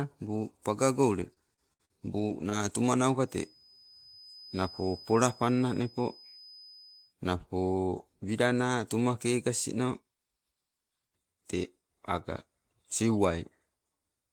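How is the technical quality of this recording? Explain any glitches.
The recording has two clear technical faults: a burst of dropouts early on and a steady tone in the middle.

Repeated packet loss (robotic sound) runs from 1.19 to 2.71 s. The stream lost data again and again over this span, and each hole was bridged by stretching the sound that came just before it. About 180 ms went missing, with the longest gap 59 ms, and roughly a tenth of a second was rebuilt. The speech there turns choppy, with fragments audibly absent.

A feedback whistle sits behind the speech from 3.19 to 7.16 s: a thin, constant tone at 5 kHz, about 25 dB below the voice, swelling and fading slowly in level. It likely comes from a loudspeaker-to-microphone loop held right at the edge of feedback, so one frequency keeps ringing without building up into a howl.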